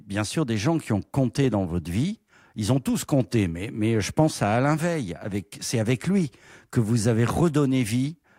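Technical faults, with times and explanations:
Nothing technical stands out anywhere in this bit of speech, so there's nothing to flag here.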